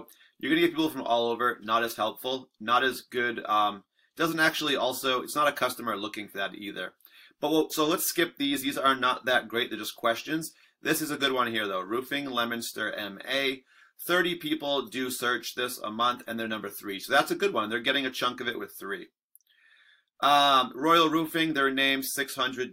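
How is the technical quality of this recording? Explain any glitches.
No glitches or faults heard.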